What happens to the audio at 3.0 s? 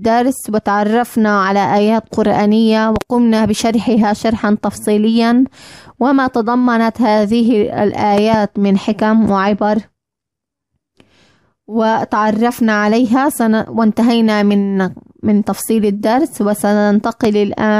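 A loud pop, a double one, strikes between 2.96 and 3.04 s, roughly 10 dB above the surrounding audio. It is likely an electrical step or pulse from a plug, switch or static discharge, shaped by later circuitry into two quick thumps while the sound continues underneath.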